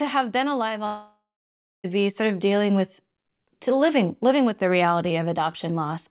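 After "have been alive", from 0.86 s to 1.86 s, the sound degrades into a fading buzz and then about 0.61 s of near-silence before resuming at "be sort of dealing", likely a long network dropout with roughly one second of audio lost and concealed.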